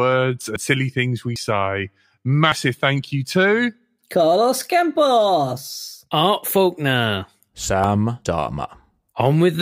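At 0.56, 1.36, 2.52 and 7.84 s the speech skips forward, most likely a dropped buffer (overrun), where samples got overwritten before being read. Roughly 70 ms vanishes at the first and last, about 40 ms at the middle two, with no gap.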